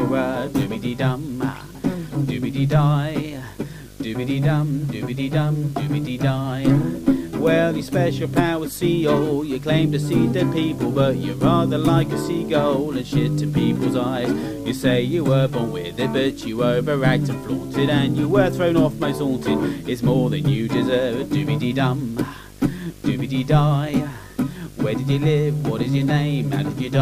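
From start to finish, a video or display buzz sits under the sound. A screen or video cable is coupling into the audio path. The buzz repeats at 50 Hz, the picture's field rate. A gritty hash rides on top of it. A thin, very high tone also sits near 15.6 kHz, which fits the display's line rate. The interference is fairly strong, roughly 20 dB below the wanted signal.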